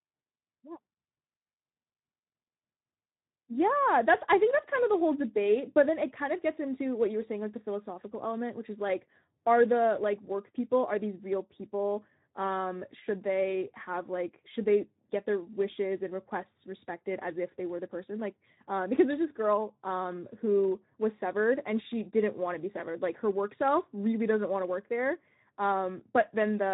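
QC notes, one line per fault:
Throughout, Speex codec: speech sounds noisy and hoarse from too few bits for the excitation, which fits a rate near 11 kbps; nothing above 3.8 kHz.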